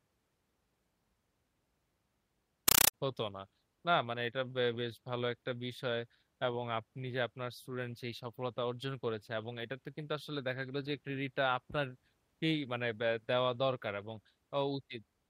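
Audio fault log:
2.68–2.94 s: compressed stream played as audio. Loud chattering static replaces the speech. Undecoded 8 ms data bursts repeat 31.25 times per second, which points to an AC-3 stream.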